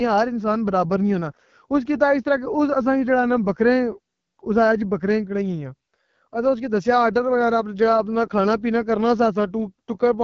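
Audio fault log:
Throughout, AMR wideband (HD Voice) codec: the speech comes across rough and raspy, which fits one of AMR-WB's lowest modes, around 8.85 kbit/s. The vocal tract model is coded coarsely at that rate, the top band is just shaped noise, and nothing reaches past about 7.3 kHz.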